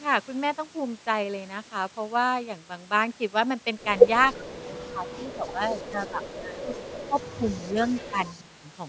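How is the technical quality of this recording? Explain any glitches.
The recording has the typical glitches of a speakerphone call, all packed into its second half. The audio is band-limited to 8 kHz by the call's microphone processing.

Speech suppressed in double talk hits from 4.36 to 6.67 s, again at 7.08–7.17, 7.37–7.46, 7.66–8.19 and 8.36–8.64 s. The speech ducks by about 15 dB, later about 10 dB, in chunks. That's likely the echo canceller muting the near talker while the far side also spoke.

Echo leak shows up at 7.52–7.91 and 8.26–8.41 s as a faint delayed copy of the speech, trailing by 334 ms and sitting about 30 dB down. It's likely a loudspeaker on one end whose canceller didn't fully scrub its mic pickup.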